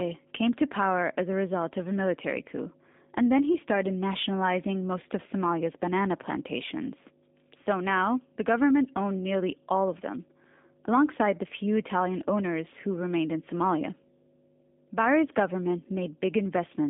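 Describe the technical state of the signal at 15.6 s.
At 15.6 s, as throughout the clip, a loud steady 50 Hz mains hum drones well below the speech, likely from a ground loop or nearby transformer feeding power-line current into the signal. The speech also sounds thin, rough and slightly synthetic, band-limited to about 200 Hz to 3.6 kHz. That points to the G.729 codec at 8 kbit/s, which rebuilds each frame from a filter, pitch predictor and a few pulses.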